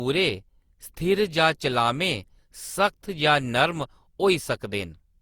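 Throughout the speech the sound is swirly, hollow and smeared, with soft, blurred consonant attacks, though content still reaches about 20.2 kHz. This is generation loss, likely from around seven lossy re-encodes, consistent with Opus near 64 kbit/s, each pass adding fresh quantisation noise.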